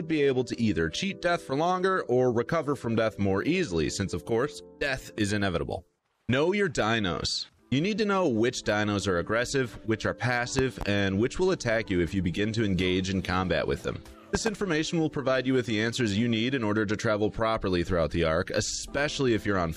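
At 10.59 s a loud pop breaks in, a pair of sharp thumps that end by 10.85 s. The sound carries on underneath. A second pair follows from 14.35 to 14.50 s. Both bursts stand roughly 15 dB above the surrounding level. The likely cause is a sudden voltage step or pulse, from a plug, a switch, static or a driver glitch, riding on the signal. Later circuits shape each pulse into a brief thump.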